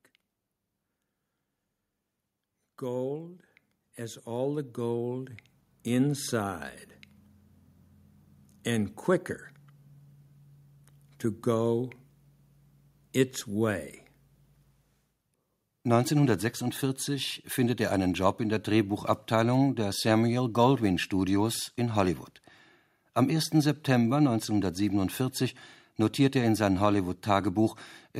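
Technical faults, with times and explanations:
2.59–6.71 s, automatic gain rising: voice and background swell together by about 12 dB over four seconds, as gain control lifts a too-quiet input.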